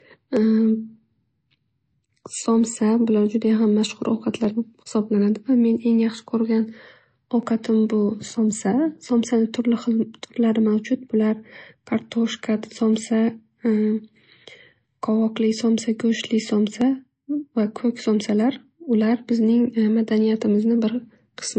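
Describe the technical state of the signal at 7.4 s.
At 7.43 s there is a single sharp click, most likely from dropped samples: less than a millisecond of the stream is missing, so the waveform jumps straight from one value to a later one instead of continuing smoothly. The gap is far too short to remove any of the speech around it. On a waveform it shows as one abrupt step discontinuity; on a spectrogram it is a thin vertical line running up through the spectrum at that instant.

That click sits on top of a band limit that runs through the whole recording, including this moment. There is no content above 8.3 kHz, and the speech still carries the artefacts of low-bitrate MP3. This is low-bitrate audio saved at a high bitrate. The file is large, but the sound points to a first pass at around 35 kbit/s that was later re-encoded at 192 kbit/s. The second encoding cannot restore what the first discarded. 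On a spectrogram the band above 8.3 kHz is empty right across the clip, ending in a hard horizontal edge, with the blotchy, patchy texture of a heavily compressed encode below it.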